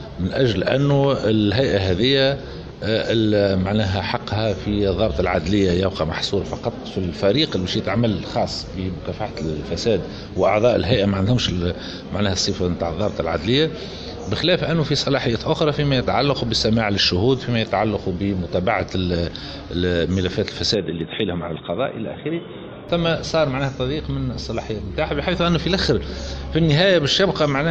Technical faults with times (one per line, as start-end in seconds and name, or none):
20.74-22.89 input switched to a poorer device